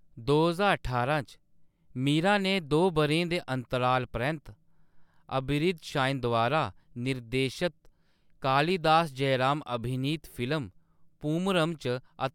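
No technical faults can be heard anywhere in this speech recording; the signal stays intact and continuous throughout.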